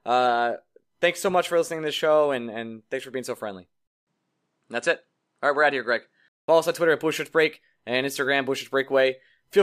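At 3.87 s the speech drops out for about 200 ms, then comes back duller, with nothing above 10.5 kHz and a new, faint background noise sitting well below the voice. The level stays about the same. At 6.48 s the brighter sound returns. That's the pattern of an input switched to a poorer device. The system likely swapped to another microphone or a headset's call profile with a narrower band, then switched back.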